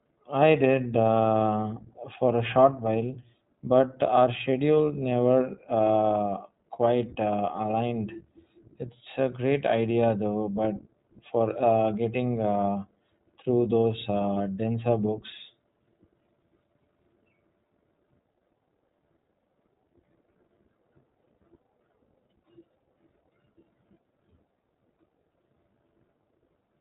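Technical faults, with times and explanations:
throughout, iLBC codec: Nothing above 4 kHz passes, so the speech is dull and clearly rough and synthetic. Each 20 ms frame is coded alone, which fits the 15.2 kbps mode.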